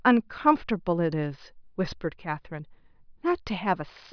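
No technical fault can be heard anywhere in the recording, and the signal stays intact throughout.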